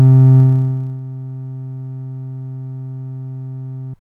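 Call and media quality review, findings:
Zipper noise, 0.39 to 1.01 s: fine ticking rides on the sound while the level drops by roughly 20 dB. Probable component is a gain or volume stage updating once per block with no ramp. It moves in 1 dB jumps, around 30 a second, and each jump leaves a tiny click. The fix is interpolating the fade across each buffer.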